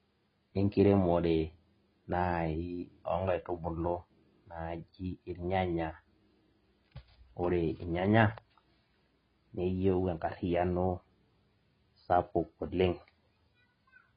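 Throughout, the speech is dull with nothing above 5.1 kHz and heavy smearing, likely AAC compression at a bitrate around 16 kbps. That smeared texture separates it from a plain low-pass filter.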